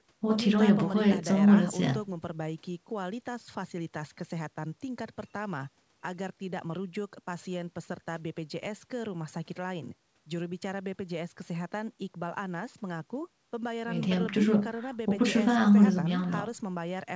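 No faults present in the speech; the band tops out at 8 kHz, which fits normal call microphone processing and a wideband codec on the WebRTC call path.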